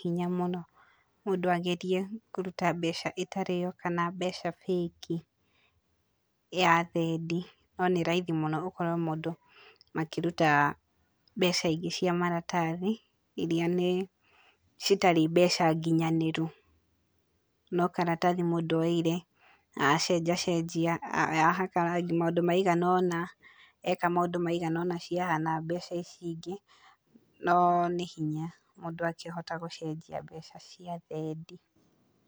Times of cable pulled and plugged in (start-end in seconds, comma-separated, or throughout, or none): none